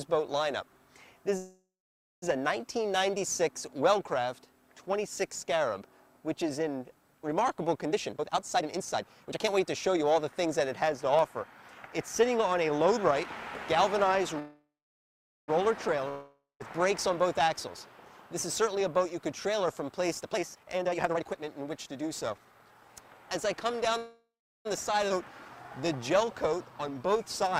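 The audio is interrupted by three call audio freezes, at 1.37 to 2.24 s, 14.39 to 15.50 s and 23.97 to 24.67 s. Each time the sound stops advancing and the last moment is stretched into a fading buzz or hiss that gives way to silence or low noise for roughly 0.58 s, 0.82 s and 0.40 s respectively. Playback then resumes where it left off with nothing missing, so each freeze pushes everything after it later by 0.85 s, 1.09 s and 0.68 s. The likely cause is packets held up in transit long enough to drain the jitter buffer. Two jitter buffer speed-ups follow, at 7.92 to 12.79 s running at 118 % and at 17.09 to 22.89 s at 119 %. The pitch stays put while the pacing is audibly hurried, because the receiver trims short pitch-period slices over and over to shed excess buffered delay, about a second's worth across each stretch. Between the second freeze and the second speed-up, a long network dropout runs from 16.09 to 16.62 s. 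The last sound is extended as a decaying buzz or hiss for about 0.51 s, including roughly 0.2 s of near silence, and when audio returns about 0.52 s of material is gone for good. That pattern likely reflects a run of packets that never arrived, rather than ones that were merely late. At 25.1 s a skip ahead joins two points in the audio almost seamlessly, with only a 10 ms fill, yet something like 0.3 s of material is absent. This is the receiver or network discarding a stretch while later audio was already queued, so the jump shortens the delay instead of adding a gap. The clip closes with a jitter buffer slow-down from 25.81 to 27.51 s at 92 % speed. Single pitch periods and bits of pauses are repeated to rebuild the buffer reserve, adding 140 ms, and the result is drawn-out sounds at unchanged pitch, possibly with a faint warble.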